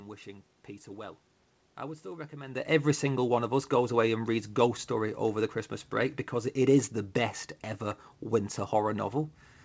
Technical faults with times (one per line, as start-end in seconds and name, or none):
none